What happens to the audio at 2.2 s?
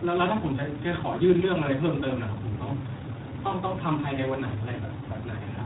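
At 2.2 s you're hearing tandem speech coding, which runs through the whole clip. The speech was decoded and re-encoded by two low-rate speech coders in a row, which fits an iLBC leg feeding G.726 via a G.711 hop. So it sounds rough, warbly and muffled, with nothing above 3.8 kHz.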